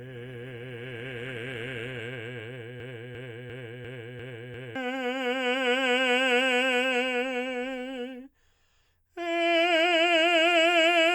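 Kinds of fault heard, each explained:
Adaptive stream starting at a low bitrate: For the first 2 seconds the music sounds thin and smeared up top, with the treble dull or kind of fizzy-synthetic and the codec artefacts stronger. At 2.0 s it suddenly opens up with no gap. That's the player starting on a cheap version of the stream to get going fast, then switching up once it trusted the connection. It sounds like roughly a 24 kbit/s Opus stream jumping to something nearer 64 kbit/s.
Broken-record loop: From 2.80 s to 4.75 s a chunk of about 0.35 s plays over and over, back to back and identical, six times in a row, before the music carries on. Whatever should have played in those two seconds is simply gone. The likely cause is something in the chain stalling, whether the player, the encoder or the stream, and just repeating the last bit of audio it had in hand until it recovered.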